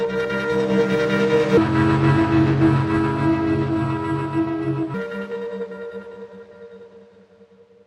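From 1.57 to 4.94 s a section at the wrong speed plays at about 0.7 times normal, likely from a wrong playback clock, sitting roughly seven semitones lower. Unlike a pure pitch shift, everything also drags slower.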